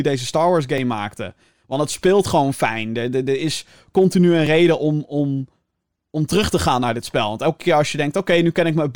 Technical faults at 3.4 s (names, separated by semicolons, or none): none